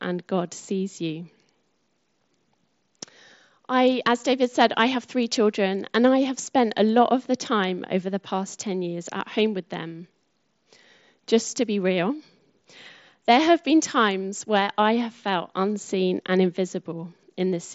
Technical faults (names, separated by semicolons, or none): none